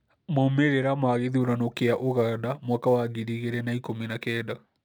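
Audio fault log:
1.40 s to 4.85 s, sample clock jitter: from 1.40 s to the end, the speech picks up a fine hiss and graininess that rises on loud passages and bright consonants and drops away in the pauses. The converter's timing wanders by a few microseconds, so each sample lands slightly off its instant. The resulting error scales with how fast the waveform is moving, sitting roughly 35 dB below the speech. A steady noise floor, by contrast, would remain audible in silence.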